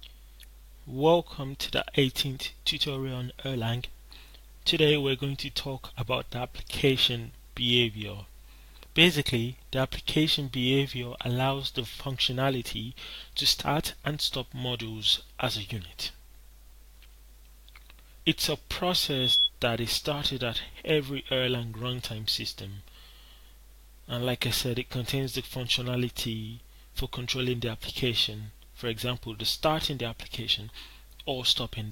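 At 18.95 s a loudspeaker feedback squeal rises at 3.4 kHz, swelling over a little under half a second to about 5 dB above the sound, then stopping at 19.50 s. The microphone re-amplified the loudspeaker until that frequency ran away. Unlike a steady interfering tone, it grows by itself.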